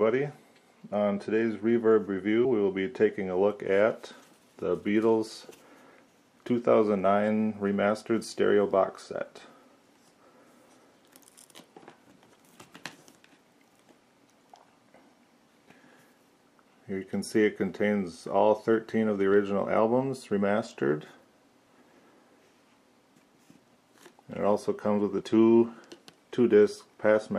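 At 2.44 to 2.46 s the sound lurches forward, and about a tenth of a second goes missing. These are compressed frames skipped. A few whole frames, which fits frames of about 23.2 ms, were never played, so the audio jumped ahead.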